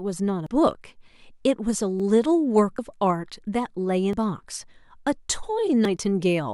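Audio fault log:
0.46, 2.00, 2.79, 4.13 and 5.85 s, dropped buffer (overrun): Each time the speech jumps forward with no gap of silence. Roughly a tenth of a second goes missing at 0.46 s, about 150 ms at 4.13 s, and about 50 ms at each of the others. The likely cause is samples not being read before the hardware overwrote them. The two sides of each hole meet directly, so the waveform breaks and the sound lurches ahead.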